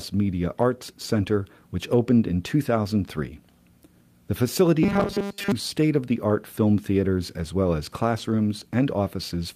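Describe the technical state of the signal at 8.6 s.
At 8.6 s the speech signal is intact, with no audible fault at that moment.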